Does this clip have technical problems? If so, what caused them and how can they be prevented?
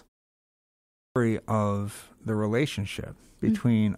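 Yes: a clipped start after a pause at 0.67 to 1.16 s. After 0.67 s of silence the output device slept, and about 0.49 s of speech was lost while it woke. Keeping the output stream active through silences, or disabling the device's power-saving idle mode, prevents this.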